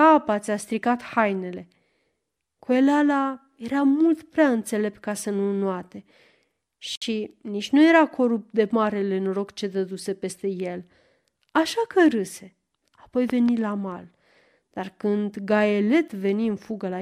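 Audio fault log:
6.95 to 7.02 s, gap at a join of encoded pieces: the speech drops into a silence of about 63 ms with smeared edges, then resumes where it stopped, as when separately encoded segments are joined untrimmed, leaving encoder start delay and final-frame padding in place.
13.30 to 13.51 s, loud pop: two sharp pops in quick succession sit about 10 dB above the speech, which carries on beneath them. The shaped pulses are likely from a sudden voltage step such as a plug, switch, static or driver glitch.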